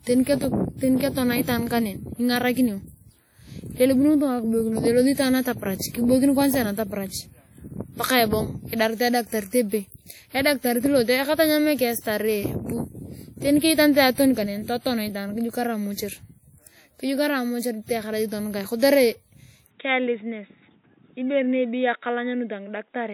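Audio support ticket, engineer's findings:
WMA compression, throughout. Plainly audible ringing and washy smear, hiss rising and falling with the speech. Likely cause: WMA-family transform coding at a low rate, consistent with roughly 48 kbps. Long blocks spread quantisation noise over tens of milliseconds and zero weak spectral lines.

Pre-echo, 11.99 to 12.05 s. Hiss leading a sharp attack by about 54 ms, attack softened. Transform block noise, sized for the loud onset late in the block, spreads evenly across the quiet part before it.

Input switched to a poorer device, 19.67 s to end, right after "mortury teyakarai tonukae kotere". No gap at the change. Sound turns dull and boxy: nothing above 3.8 kHz, level drops by roughly 5 dB, new background noise sits about 45 dB under the signal. Likely mid-recording switch to another microphone or a headset call profile.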